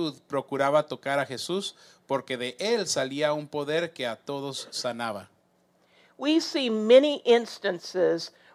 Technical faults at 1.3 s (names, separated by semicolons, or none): none